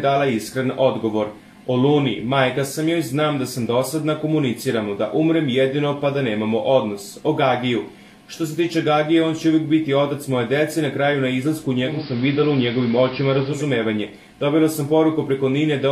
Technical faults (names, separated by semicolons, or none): digital radio blending to analogue